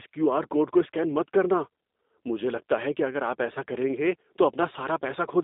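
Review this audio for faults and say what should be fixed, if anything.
The speech runs through a G.729 codec for its whole length. Nothing passes above about 3.8 kHz, and the band sits between 250 Hz and 3.7 kHz. The voice is rebuilt from a vocal tract filter, a pitch predictor and a few pulses per frame. That makes it rough and synthetic, and the damage is plainly audible. The thin, buzzy texture fits an 8 kbit/s G.729A stream. To prevent it, carry the call on a wideband codec such as G.722 or Opus.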